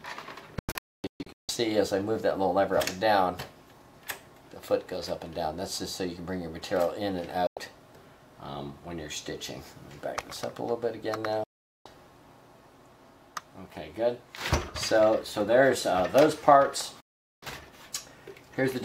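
The sound cuts abruptly to silence, fading out in about 3 ms, at four points. From 0.59 to 1.49 s it breaks into several short holes totalling about 0.7 s, the longest near 0.26 s. It then drops out from 7.47 to 7.57 s, from 11.44 to 11.86 s, and from 17.00 to 17.43 s. This is digital broadcast dropout: the receiver muted whenever incoming frames were lost or corrupted, and the gap lengths fit frames of about 32 ms. Whatever was sent during those holes is gone.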